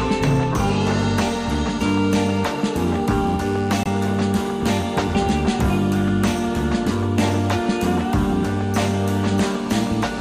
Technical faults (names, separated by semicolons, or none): corrupt frame muted